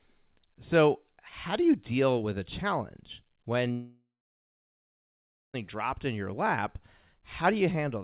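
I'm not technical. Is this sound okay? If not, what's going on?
No. A long network dropout, most likely, hits from 3.72 to 5.56 s. The connection stopped delivering sound, so the last bit was stretched into a fading buzz and then about 1.5 s of silence. The speech then resumes with roughly 1.8 s lost. Throughout, the phone-call sound has nothing above 4 kHz.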